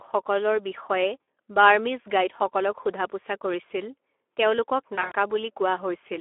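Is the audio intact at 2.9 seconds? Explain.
No. The sound at 2.9 s is still marred by VoIP packet loss concealed by the speech codec. At 2.83 to 2.85 s the audio briefly turns into a stretched fragment that fades rather than continuing cleanly, consistent with a single 20 ms frame going missing. The decoder filled the gap by repeating its last pitch and spectral envelope at falling gain. Because each new frame is decoded from that guessed state, the sound just after, around 2.9 s, can still come out weak or distorted while the decoder recovers.

Underneath, the Speex codec damage is plainly audible there as everywhere: a hoarse, noisy texture inside a narrow 300 Hz to 3.5 kHz line band. This fits a mid-to-low quality setting of about 11 kbps, where too few bits are left to code the excitation faithfully.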